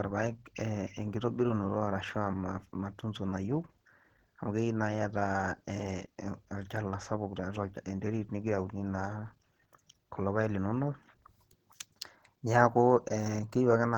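From start to finish the speech sounds hoarse and muffled, with a grainy, rough texture over the voice rather than any swirling or hollow holes in the spectrum. Content still reaches about 20.2 kHz. This is likely Opus compression running in its hybrid speech mode at a low rate, which fits a bitrate around 16 kbps: the encoder keeps each band's energy but fills detail coarsely, leaving the damage plainly audible.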